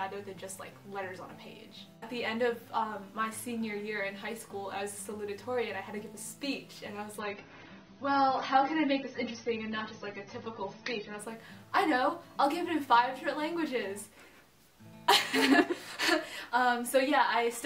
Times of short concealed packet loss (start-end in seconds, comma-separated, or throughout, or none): none